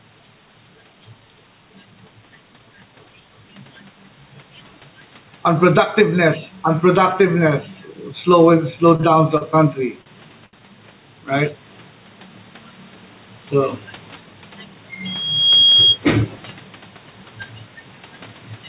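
Throughout the clip there is gain pumping, likely from input gain set far too high and a fast limiter or compressor clamping down whenever the speech gets loud. Each loud syllable pulls the level down by around 10 dB. Quiet and loud passages sit unnaturally close together, giving the speech a squashed, breathing quality.

Just after "unproductiveness slow and slow", a run of short stalls from late packets begins, at 8.96 s, 9.01 s, 9.37 s, 10.02 s and 10.46 s. Each time, the next packet had not arrived when it was due, so the jitter buffer ran dry. The receiver held the last bit of sound for between about 18 and 70 ms until the packet turned up, then carried on from the same point. Nothing is lost, but each moment is smeared out with a brief hold, and the longest stretch, about 70 ms, is at 10.46 s.

From 15.05 s to 15.99 s a loudspeaker feedback squeal appears. The microphone was picking up the loudspeaker it fed, and at 3.3 kHz the loop gain went past one, so that frequency built itself up over roughly half a second. 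It becomes a single piercing tone, about as loud as the speech, before it stops. Because the call path's band ends at 4 kHz, the squeal sits near the top of what the line can carry.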